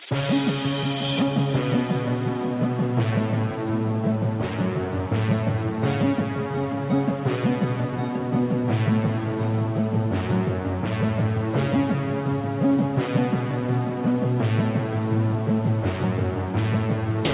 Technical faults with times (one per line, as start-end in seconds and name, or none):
none